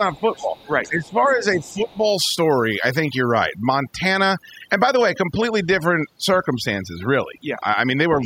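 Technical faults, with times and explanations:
Throughout: overdone noise removal. The background sinks to near silence dotted with twinkling, chirpy specks, and the speech has its quieter edges and softer consonants missing. The noise reduction was pushed too hard on a noisy recording. It drives individual frequency bands down or off whenever they sit close to its estimate of the noise floor, and the low-level parts of the speech in those bands get cut away along with the noise.
0.0 to 0.68 s and 0.89 to 2.04 s: speech suppressed in double talk. In these stretches the talker's speech dips. The first stretch falls by about 10 dB at its deepest, for around half a second in total. The second goes deeper, to about 15 dB, for roughly a second overall. This is likely the echo canceller meeting both sides talking at once. Unable to tell the near talker from the loudspeaker echo, it turned everything down together.
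0.17 to 0.67 s, 0.83 to 1.34 s, 1.63 to 1.97 s and 8.21 to 8.26 s: other side's voice leaking through. A second, faint voice can be heard under the talker. It sits about 25 dB down in the first two spans, fainter still at about 35 dB down around 1.6 to 2.0 s, and a brief scrap about 20 dB down closes the clip. This is likely far-end speech played on the talker's loudspeaker and picked up by the microphone, which the echo canceller failed to remove completely.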